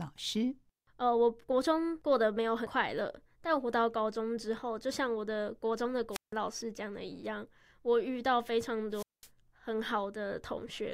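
At 6.11 s and again at 8.92 s the speech breaks up in a wireless microphone squelch dropout. The radio signal from the transmitter weakens, the receiver's squelch closes, and the output is muted for about 160 ms in the first event and about 205 ms in the second. Each event ends by 6.33 s and 9.29 s respectively. What separates this from a digital packet loss or a loose cable is the short surge of hiss just before each hole.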